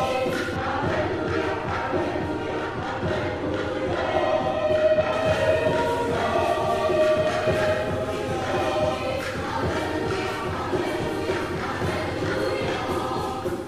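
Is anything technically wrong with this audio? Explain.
Yes. De-emphasis applied wrongly affects the audio from 0.56 to 5.13 s. A treble-cutting filter meant to reverse pre-emphasis was applied where none existed, or twice, tilting the response smoothly downward to about 11 dB lower at 10 kHz than at 1 kHz. The result sounds dull and muffled.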